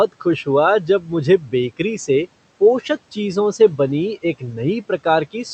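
At 0.87 to 1.1 s and again at 1.39 to 1.53 s, you get speech cut by the noise suppressor. It mistakes bits of speech for background and pulls them down, by about 8 dB and about 11 dB, so those moments sound swallowed and faint.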